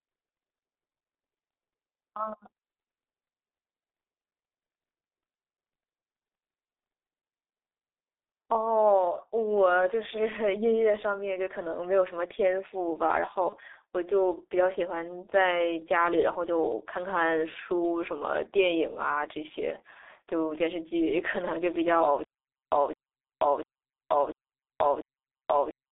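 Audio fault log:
Throughout, G.723.1 codec: the speech sounds muffled and hoarse, with consonants smeared together and a rough, grainy texture on voiced sounds. The band is squeezed to roughly 300 Hz to 3.7 kHz, so there is no air or sibilant sparkle above it. The heavy damage fits a very low rate near 6.3 kbit/s. The coder works in 30 ms frames and adapts its model of the voice slowly, so quick changes in the speech come out blurred.
8.43 and 13.49 to 13.55, VoIP packet loss concealed by the speech codec: at each point the speech briefly turns into a smeared, buzzy continuation that sags in level, and the second event lingers a little longer before clean speech returns. Each spot fits one lost 30 ms frame. The decoder filled the hole by repeating its last pitch and filter settings at falling gain, and because every frame depends on the previous one, the distortion carries on briefly after real data resumes.
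22.24 to the end, stutter with silent gaps: the same fragment of about 0.21 s plays, then drops into about 0.48 s of dead digital silence, and this repeats five times at an even 0.69 s pace until the clip ends. The speech that belonged in this stretch never arrives. The likely cause is a stalled player or stream that replays its last buffered chunk at each retry and then runs dry.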